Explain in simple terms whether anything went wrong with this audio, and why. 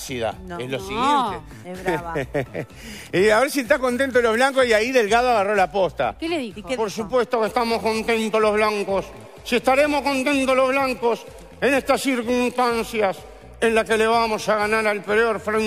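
Nothing went wrong on the technical side: the audio comes through steady and intact, with no breaks, glitches or distortion anywhere in it.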